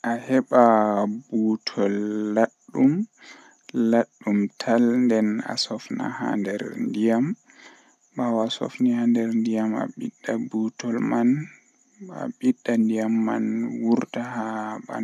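Speech recording, with no technical faults audible anywhere in the clip.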